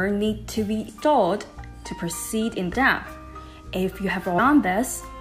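At 0.88, 2.73 and 4.38 s, compressed frames are skipped. The audio jumps ahead by around 150, 200 and 400 ms, which fits whole frames of about 26 ms going missing or being rejected.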